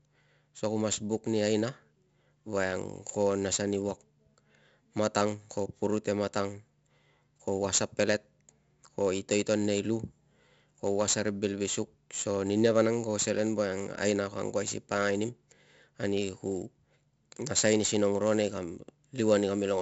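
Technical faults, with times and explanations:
Throughout, 4-bit ADPCM compression: each speech sample is coded as a coarse 4-bit step from a predicted value, so a gritty hiss rides on every loud syllable and rises and falls with the level. Consonant onsets smear where the step size lags the attack. The damage is heavy, and the band stops sharply at 7.7 kHz, which fits a low sample rate, with the bitrate at 64 kbps. On a spectrogram this shows as level-tracking broadband noise under a hard ceiling. The waveform lags behind sharp transients.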